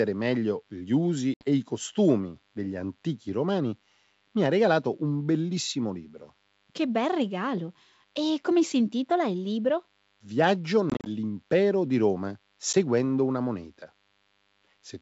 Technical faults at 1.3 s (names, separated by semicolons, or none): DECT cordless phone buzz; packet loss on an ADPCM call